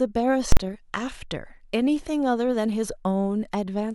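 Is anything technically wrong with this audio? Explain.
Yes. From 0.52 to 0.57 s, the speech is replaced by invalid numbers at full scale. A calculation produced infinite or invalid values that were pinned to the maximum level for about 46 ms, which fits a 2048-sample block. This is heard as a loud pop at each edge with silence between.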